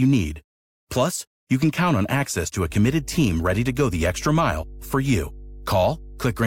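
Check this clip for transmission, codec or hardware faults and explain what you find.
One hardware fault is present: mains hum from 2.67 s to the end at 6.46 s. A ground loop or nearby transformer is coupling the 50 Hz power line into the signal, adding a steady low tone under the speech, roughly 15 dB below it.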